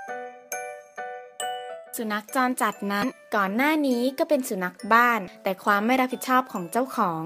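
A short burst of damaged data in a compressed stream occurs at 3.02 s. Corrupted bytes there leave the decoder unable to read the affected frame, so it loses sync and resynchronises at the next valid frame header, producing a brief disruption in the audio.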